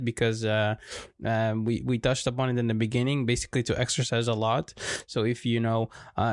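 Nothing in the recording stood out as a technical fault on listening.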